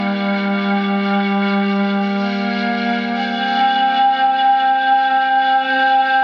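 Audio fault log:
Throughout: resampler restarted on every block, so each 50 ms block edge gets a small error, giving steady 20 Hz ticks under the music, consistent with 44.1 to 48 kHz conversion.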